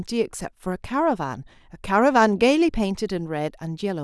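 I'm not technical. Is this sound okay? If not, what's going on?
Yes, nothing in this recording stood out as a problem when I listened to it.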